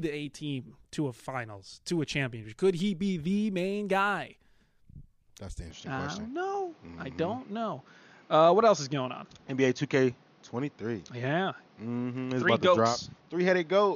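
At 5.71 s the speech turns duller until the end, with nothing above 6.8 kHz and no gap or level jump, likely an input switched to a poorer device. Unlike a simple filter, a new background noise floor arrives, about 30 dB down.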